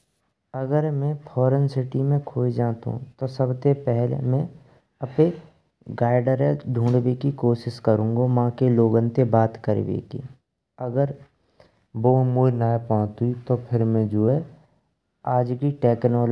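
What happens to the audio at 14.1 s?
Wrong sample rate from 11.95 to 14.28 s: the speech plays back about 8% too slow and roughly 1.5 semitones low, which fits 24 kHz audio played at 22 kHz.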